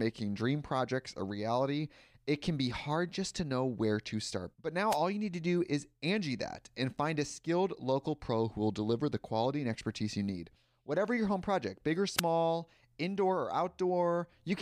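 A wireless microphone noise hit occurs at 4.89 to 4.98 s, just before "you need to do", and again at 12.17 to 12.21 s, right after "home project big or". In each case the FM radio link between transmitter and receiver faded as reflected paths cancelled, so receiver noise surged up. The first is a swish of static about 90 ms long. The second is a briefer burst of static of about 40 ms.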